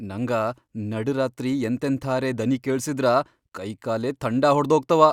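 No technical faults can be heard anywhere in the speech recording, and the signal stays continuous and stable throughout.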